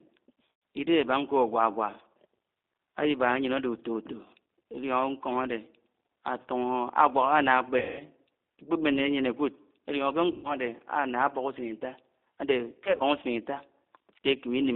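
The whole speech track passes through the G.729 codec at 8 kbit/s. The line band runs from 250 Hz to 3.7 kHz, so it sounds thin. Each short frame is rebuilt from a filter and a few pulses. That gives a plainly rough, synthetic texture.

VoIP packet loss concealed by the speech codec occurs four times. Audio is lost from 0.50 to 0.62 s, 7.79 to 8.02 s, and 10.32 to 10.56 s. Near 12.84 to 13.02 s, short runs are lost. The decoder stretches its last frame into a fading buzzy tone or coloured noise, and the voice recovers slowly afterwards.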